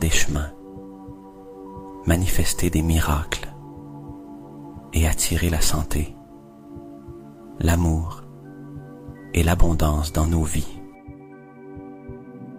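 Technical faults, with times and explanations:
No technical faults are present.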